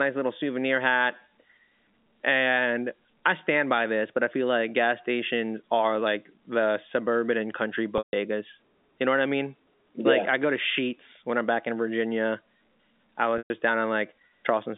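Right after "the suburban and country", at 7.98 s, there's a packet loss with pitch repetition lasting about 150 ms, to 8.13 s. The receiver filled the hole by looping the last pitch period, so you hear a brief held buzz that dies away after roughly 50 ms into a gap before the speech cross-fades back. A second, shorter one hits at 13.38 to 13.50 s, about 120 ms, with the same buzzy hold and fade, all over the narrow G.711 telephone band.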